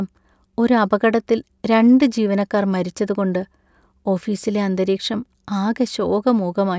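No technical faults can be heard anywhere in this speech recording. There is nothing to place on a timeline or trace to a cause.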